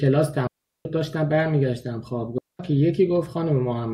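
At 0.47 s and again at 2.38 s the speech drops into a digital wireless dropout, muting for about 380 ms and 210 ms. The receiver lost too much data and faded out. Unlike an analogue dropout, each gap is clean silence with no noise bursts.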